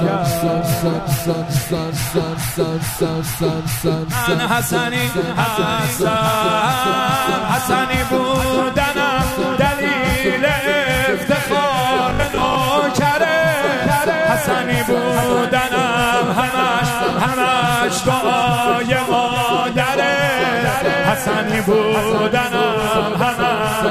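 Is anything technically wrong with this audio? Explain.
Yes. From 12.09 to 12.55 s there is robotic sound from repeated short buffers. New audio likely arrived too seldom, so the last short stretch was replayed in place of roughly two fifths of the real audio. The repeats impose a 50 Hz buzz, which fits a 20 ms buffer, and leave a rigid, metallic drone over the sound.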